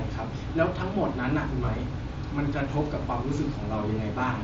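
From 1.65 to 1.68 s the speech shows concealed Bluetooth headset packet loss. About 22 ms of headset audio, likely a few lost frames, was filled by repeating the best-matching recent stretch of waveform. Unlike a dropout's silent gap, this holds a brief buzzy tone at full level, with a slight warble on return.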